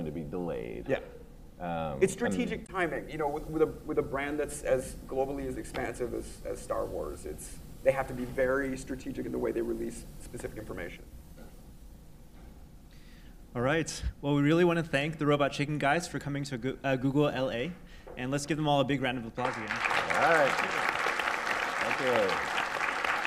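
At 2.65 to 2.70 s, damaged data in a compressed stream causes a brief disruption lasting about 40 ms: the decoder misreads corrupted frames and loses sync before locking onto the next header.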